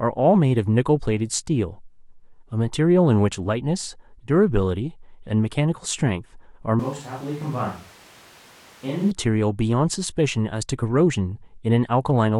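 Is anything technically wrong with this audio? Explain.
Yes. From 6.80 s to 9.11 s the speech turns suddenly roomy and hollow, with thinner bass, a level about 10 dB lower, and background noise rising to about 20 dB below the speech. It snaps back just as abruptly. This is likely a switch to a distant microphone, with a far-off pickup covering for the close one. A simple gain dip would leave the tone and noise unchanged, but here the room character and noise both jump with it.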